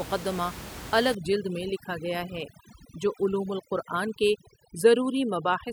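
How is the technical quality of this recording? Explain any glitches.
The recording suffers from overdone noise removal, from 1.15 s to the end. Before that, the room noise sits about 14 dB below the speech. From 1.15 s, a noise reduction stage acts far too hard. It compares each frequency band against its estimate of that background noise. Bands that come close get pushed almost to nothing. Quiet parts of the speech fall below that line too and vanish with the noise. The background drops, dotted with twinkling specks.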